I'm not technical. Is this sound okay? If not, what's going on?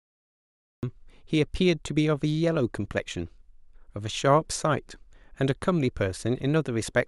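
No, there's a cut-off start: it's silent until about 0.83 s, then the speech jumps in mid-sound, because the recording started a moment too late.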